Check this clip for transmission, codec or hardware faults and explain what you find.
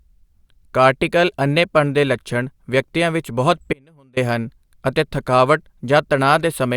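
One fault turns up in the speech: an audio dropout to a faint residue from 3.73 to 4.17 s. The signal vanishes abruptly for 0.43 s, likely a brief loss upstream with the path still live, leaving only a faint leak roughly 30 dB down. The waveform shows a sudden near-flat gap, and the spectrogram shows a dim band.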